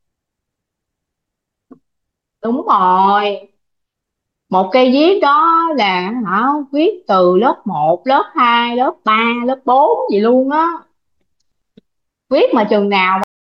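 At 13.24 s the speech has a cut-off end: it stops mid-sound and falls straight to digital silence, with no natural decay, for the final 0.3 s. The last buffers of audio were never written or played, so the sound is truncated.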